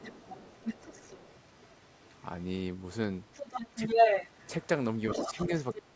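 An echo canceller that likely failed to fully remove the loudspeaker signal lets the other side's voice leak through: from 0.00 to 1.87 s about 15 dB under the talker, faintly at 2.04 to 2.24 s, louder than the talker from 3.33 to 4.67 s, and just below it at 5.10 to 5.46 s. Where that same canceller likely could not separate the two talkers, speech is suppressed in double talk: a slight dip of about 5 dB around 5.31 to 5.51 s, then a deep cut of about 25 dB from 5.75 s to the end.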